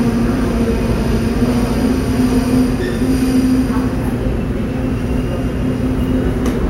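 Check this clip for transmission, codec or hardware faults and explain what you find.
No faults turn up anywhere in this clip.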